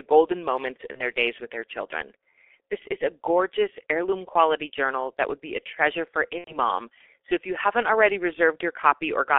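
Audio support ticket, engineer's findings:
G.723.1 codec, whole clip: speech muffled and hoarse, consonants smeared. Spectrogram shows energy confined to roughly 250 Hz to 3.5 kHz, blank above, with coarse blocky 30 ms frame structure; heavy damage, consistent with the 6.3 kbit/s mode.

VoIP packet loss concealed by the speech codec: 0.92–1.01 s, between "golden moments" and "days with their children", and 6.38–6.58 s, after "be a treasure for". Decoder extrapolates its last pitch and filter, so the sound is stretched into a buzzy tone or coloured noise that fades out. On the waveform this shows as a decaying envelope, then weak audio after recovery. The first gap fits one lost 30 ms frame, the second about 90 ms lost.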